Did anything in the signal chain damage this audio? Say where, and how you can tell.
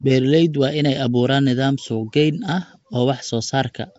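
Yes, at the codec stage, throughout the speech. Nothing reaches above 7.7 kHz, and the speech carries a rough, hissy halo with a smeared, underwater quality. This is likely Nellymoser compression, at a rate consistent with about 32 kbps. The codec works on short blocks at a fixed, very low bit budget, so weak bands get no bits and are filled with noise. That substituted noise sets it apart from a plain low-pass filter.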